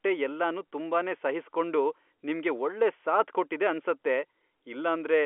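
A speech recording heard over a G.711 telephone line, with nothing technically wrong with it.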